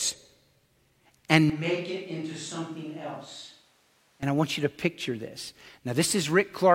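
A speech clip in which, from 1.50 s, just before "I want you to", to 4.23 s, the sound abruptly turns roomy and hollow, drops about 10 dB in level, loses low end, and sits over a noise floor about 30 dB below the speech, then snaps back. This is likely a switch to a distant microphone. On a waveform the section shows a sudden step down in amplitude; a spectrogram shows thinner bass, smeared reverberant tails and a raised broadband noise band.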